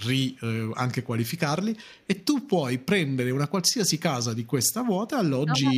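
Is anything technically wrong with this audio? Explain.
Yes, two faults are audible in this speech clip.

From 1.82 to 2.07 s there is an echo leak, likely from a far end playing the call on a loudspeaker whose echo canceller left part of the pickup in place and returned it. The residue arrives 386 ms behind the original. It sits very low, roughly 40 dB under the direct speech, so it comes across as a brief, faint trailing copy rather than a clear repeat.

From 5.44 to 5.66 s there is speech suppressed in double talk. With both ends talking at once, the echo canceller likely could not separate local speech from loudspeaker echo and turned everything down. The talker's level sags by around 15 dB at its deepest point, with roughly 150 ms of the stretch affected. The voice briefly dips in patches instead of staying steady.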